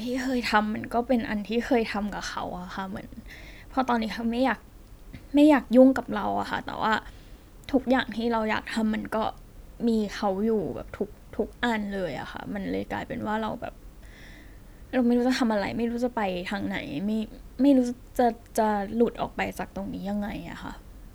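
No technical faults are audible anywhere in the recording.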